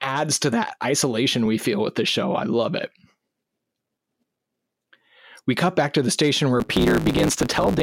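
From 6.59 s to the end of the clip at 7.82 s, there is a block size mismatch (truncated): one stage hands over longer blocks than the next stage takes in, so the tail of every block is dropped. The speech jumps forward about 1.16 times faster while keeping its timbre, and a buzz at 109 Hz, the rate of the cuts, runs underneath it. That pattern fits a 512-sample write feeding a smaller read.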